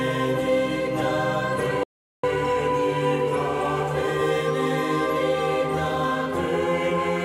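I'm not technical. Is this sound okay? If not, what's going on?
No, not quite. The music plays normally, then at 1.83 seconds it cuts out completely and comes back at 2.24 seconds, about 0.4 seconds later. That's an audio dropout to silence: the gap is dead quiet, with no background hum at all, and whatever was playing in that moment is simply gone. The likely cause is the input briefly losing its signal, from a loose connection or a momentary mute, while the recording kept running.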